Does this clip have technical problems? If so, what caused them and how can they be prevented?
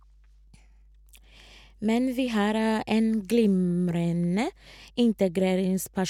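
Yes. A ground loop or nearby transformer is coupling the 50 Hz power line into the signal path, producing mains hum: a steady low tone, roughly 30 dB below the speech, running under the whole clip. Prevent it with a single grounding point, balanced cables and distance from transformers.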